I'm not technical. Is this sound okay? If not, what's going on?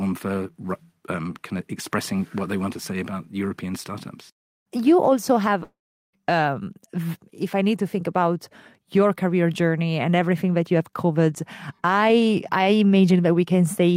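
No. Between 5.63 and 6.15 s the speech breaks off. The last sound is stretched into a short, fading buzz or hiss, then there is silence for roughly 0.4 s before the speech resumes further along. About half a second of the recording is simply gone, not delayed. This pattern is likely a long network dropout: the audio stopped arriving for a moment, the receiving end covered the gap as best it could, and playback continued without the lost part.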